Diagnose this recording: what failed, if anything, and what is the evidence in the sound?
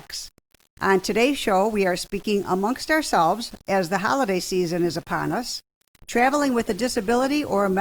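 Grainy distortion follows the sound's level throughout, sitting roughly 30 dB below it. This points to low bit depth without dither, likely from a sample-format conversion rounding to about 7 bits.

From 4.83 s to the end, codec artefacts suddenly rise with no gap. This is an adaptive stream at a lower bitrate, which fits the network forcing Opus down from 64 to 24 kbit/s.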